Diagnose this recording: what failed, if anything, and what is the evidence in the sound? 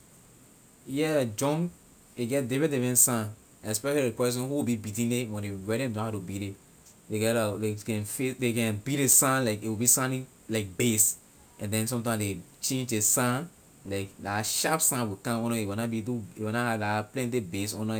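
Sample-rate conversion from 22 kHz to 48 kHz used linear interpolation, causing imaging from linear upsampling: mirrored speech fills 11 to 22 kHz, roughly 15 dB down, giving sibilants a metallic shimmer throughout.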